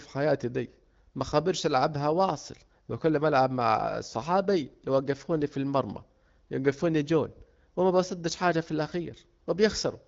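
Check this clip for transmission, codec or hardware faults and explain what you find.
No transmission, codec or hardware faults can be heard in the clip. The speech comes through an AMR wideband (HD Voice) link with nothing above about 7.4 kHz and only light coding texture, which fits the codec running at one of its clearer rates, around 12.65 kbit/s.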